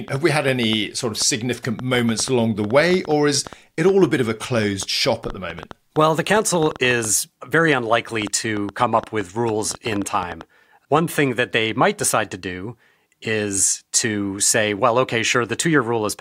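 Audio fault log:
0.08–10.98 s, train of clicks: uneven ticking and popping over the speech and its pauses, about 5.5 per second, some seventy similar sharp pulses peaking roughly 5 dB above the speech; likely nearby interference or a faulty connection injecting repeated pulses.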